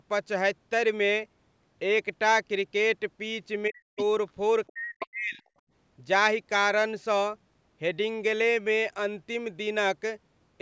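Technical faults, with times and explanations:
3.68–3.98 s and 4.71–5.44 s, speech suppressed in double talk: The speech dips deeply, by roughly 40 dB at worst, and breaks up. This is likely an echo canceller turning down the talker while the far side also spoke, unable to separate the two.
3.98–4.03 s, 4.67–4.71 s and 5.00–5.07 s, other side's voice leaking through: Brief scraps of a second voice appear, roughly 10 to 30 dB below the main speech. This is likely loudspeaker echo the canceller failed to remove.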